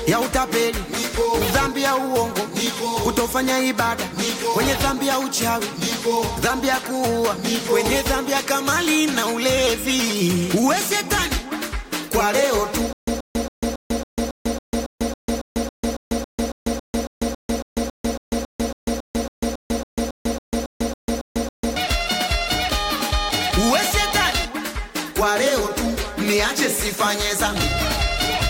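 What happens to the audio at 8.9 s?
Nothing goes wrong at 8.9 s; the audio runs through that moment intact, with no dropout, click or distortion to be heard.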